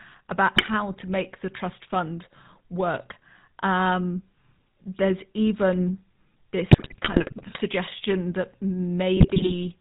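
Throughout, the speech carries GSM full-rate codec coloration: nothing above 4 kHz and a buzzy, gravelly grain from pulse-driven excitation, which a plain low-pass filter would not add. GSM bit errors follow at 0.56 to 0.69 s, 6.70 to 7.58 s and 9.17 to 9.54 s. Corrupted filter, pitch and gain values distort frames into squawks, pops and gargling rather than clean silent dropouts.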